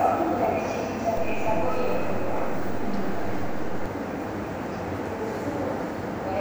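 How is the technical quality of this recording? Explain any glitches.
The recording has one glitch, a DC step. From 1.17 s to 3.86 s the waveform's zero line jumps by about -24 dBFS, as when an input with an offset is switched in, then returns. Each shift, at 1.17 s and at 3.86 s, lands as a low thump while the sound itself carries on unchanged.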